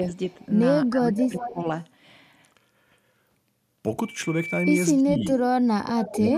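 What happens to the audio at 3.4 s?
Nothing goes wrong at 3.4 s; the speech continues intact through that moment with no dropout, click or other fault.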